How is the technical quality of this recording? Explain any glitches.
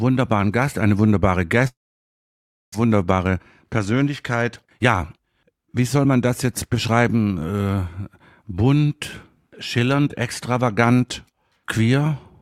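The recording has two linked network faults, so its technical quality is poor from about 1.7 to 7 seconds.

From 1.67 to 2.76 s there is what sounds like a long network dropout. The likely cause is that incoming audio stopped arriving for about a second. The receiver briefly stretched the last sound into a fading buzz, and most of the gap is near-silence. When the sound resumes, roughly 0.6 s of material is simply gone, so it picks up further along than where it broke off.

From 2.84 to 7.04 s a jitter buffer speed-up follows. The delayed audio arrived in a burst and the buffer overfilled, so the receiver repeatedly trimmed tiny pitch-period-sized slices to catch up, about half a second in total. The sound plays at about 111% speed with unchanged pitch, giving a hurried feel until 7.04 s.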